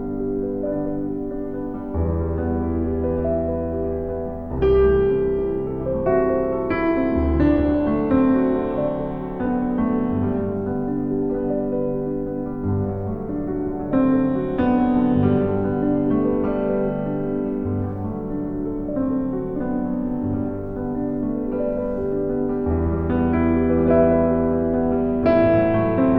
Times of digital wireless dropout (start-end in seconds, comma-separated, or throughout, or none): none